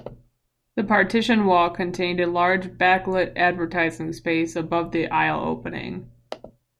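No technical faults can be heard anywhere in this speech recording.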